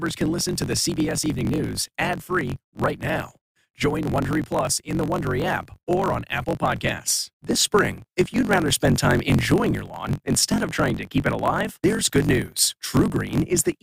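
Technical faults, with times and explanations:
Throughout, block size mismatch (truncated): a steady 46.9 Hz buzz, speech 1.12 times fast with its timbre kept; each block's end is discarded, fitting 1024-sample reads.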